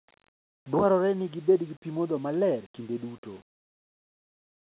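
Nothing in this speech recording goes wrong at any point, so there's really nothing here to flag.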